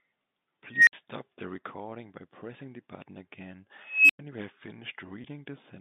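This speech clip comes over a G.711 telephone path, heard as a narrow band topped near 3.7 kHz. Two unstable filter faults break through it. At 0.72 s a squeal around 2 kHz swells over about 150 ms. It clips, then the sound cuts out for 60 ms, until 0.93 s. At 3.83 s a higher tone around 3 kHz builds more slowly, over about 270 ms. A 100 ms silence follows, ending at 4.19 s. Both come from a recursive filter whose feedback runs away until its numbers overflow and it resets. At 5.22 s there is a brief packet loss with pitch repetition. The gap is 20 ms, which fits a single lost packet. The receiver fills it by repeating the last pitch period. This gives a short, slightly buzzy hold before the speech carries on.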